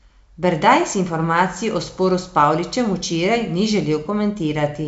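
No technical faults occur in this speech, which comes through G.722 wideband telephone coding at 64 kbit/s.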